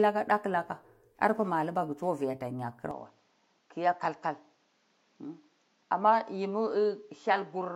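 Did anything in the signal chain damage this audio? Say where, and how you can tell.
Yes. From 2.91 s the speech turns duller, nothing above 7.6 kHz, about 5 dB quieter, with new faint background noise and no gap, likely an input switched to a poorer device.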